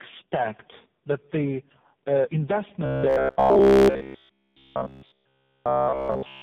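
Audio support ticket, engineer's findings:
Tandem speech coding across the whole clip: rough, muffled, warbly. Three speech codecs in a row, G.726 at 24 kbit/s, GSM full rate, then AMR-NB at 5.15 kbit/s, each re-encoding the previous one's damage.

Robotic sound from repeated short buffers from 2.86 s to the end: a rigid metallic buzz at 66.8 Hz that loosely tracks the speech. Likely starved playout recycling one roughly 15 ms buffer, with the real audio skipped and pretty much everything repeated.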